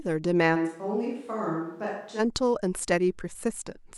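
From 0.57 s to 2.18 s, the close microphone's signal most likely dropped out and the recording fell back on a microphone further from the speaker, a switch to a distant microphone. The speech abruptly turns roomy and hollow, loses bass, and sits roughly 10 dB quieter. Room noise rises to around 40 dB below the speech. At 2.18 s the close, fuller sound snaps back just as suddenly.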